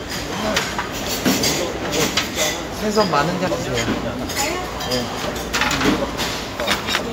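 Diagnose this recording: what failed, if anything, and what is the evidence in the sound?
Compressed frames skipped at 6.99 s: a codec-stage fault. The audio jumps forward by roughly a fifth of a second, consistent with several missing 32 ms frames. Those frames were either missing from the file or refused as damaged by the decoder, so they were never played.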